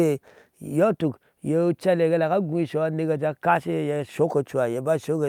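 Nothing stood out as a technical problem on listening to this speech recording.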